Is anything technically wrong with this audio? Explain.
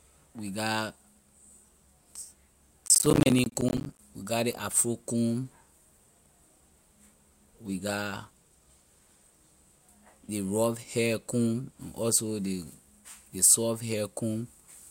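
Yes. Processor overload crackle runs from 2.86 to 3.99 s, ending just before "we get ley afro". The processor missed dozens of deadlines in a row, each dropping a short slice of sound to silence. The gaps fit buffers of around 10 ms, producing a gritty, tearing crackle across the speech.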